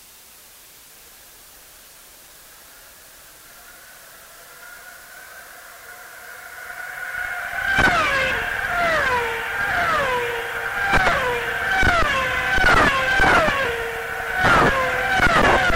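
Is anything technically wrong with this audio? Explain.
Yes. Low bit depth with dither runs throughout: the audio is reduced to about 6 bits with dither added before rounding, so the rounding error becomes a steady, even hiss roughly 25 dB below the signal rather than distortion. On a spectrogram it shows as a uniform noise floor across all frequencies.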